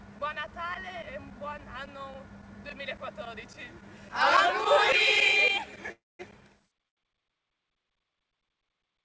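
A call audio freeze runs from 5.92 to 6.21 s. The last sound fades out and about 0.22 s of silence follows. This is likely a jitter buffer running dry while packets were held up. Playback then resumes where it stopped, 0.27 s late, with nothing lost. A short stall from a late packet follows at 6.88 to 6.99 s, where the last sound is stretched about 90 ms until the packet arrives. It is audible over a band that stops at 8 kHz, which fits G.722 at 64 kbps.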